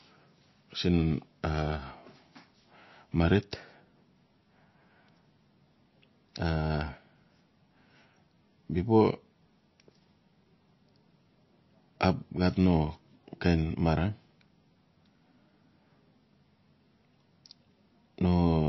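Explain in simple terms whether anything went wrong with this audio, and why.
Loudspeaker feedback squeal, from 7.17 to 8.24 s: a thin, piercing tone near 5.9 kHz rises over about a second until it is louder than the speech, then stops. This happens when a microphone picks up the loudspeaker it is feeding. The sound loops around, and at one pitch it gets stronger on every pass, so that single tone keeps growing by itself into a squeal.

MP3 compression, throughout: the speech sounds muffled and watery, with nothing at all above about 5.8 kHz, so the crisp top end of s sounds is missing. The likely cause is a heavily squeezed MP3. To save space, the encoder throws away all the highest frequencies and drops quiet detail that flickers in and out, which leaves that dull, swirly quality.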